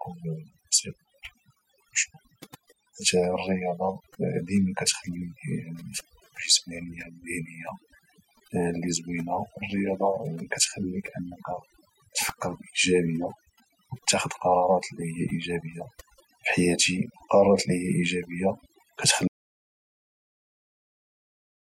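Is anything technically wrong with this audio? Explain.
Yes. There are two faults.

Overdone noise removal runs through the whole clip. A noise reduction stage was pushed too hard. It cuts individual frequency bands down or out whenever they sit close to its noise estimate. Quiet parts of the speech fall below that line and vanish with the noise. The background becomes near silence dotted with twinkling specks.

An audio dropout to silence starts at 19.28 s and lasts to the end, about 2.4 s. The sound cuts out abruptly in mid-flow. What follows is complete silence, with no room tone underneath. The likely cause is a lost input, such as a disconnected device, a failed link or an accidental mute, while recording carried on writing silence. Anything said in those final seconds is gone.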